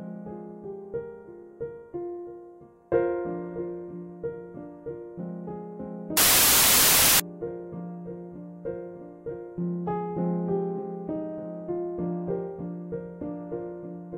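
From 6.17 s to 7.20 s the audio gives way to loud, harsh noise, with the original sound only faintly audible underneath, running at 1.5 times normal speed with its pitch raised to match. This is a wrong sample width fault: samples written as 16-bit integers were read back as packed 24-bit integers. Each value read takes in bytes from neighbouring samples, so most of the result is noise, and the shorter sample count plays out faster.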